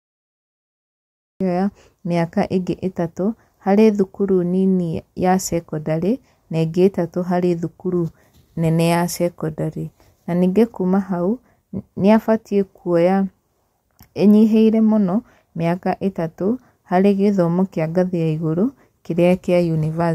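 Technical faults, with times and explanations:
0.00–1.41 s, cut-off start: the clip opens with about 1.4 seconds of dead digital silence, and then the speech appears abruptly at 1.41 s, already partway through a sound, with no natural onset or fade-in to lead into it. This happens when the recording or stream begins capturing late, after the speaker has already started, so the opening of that sound is missing and the audio jumps straight from nothing into its middle.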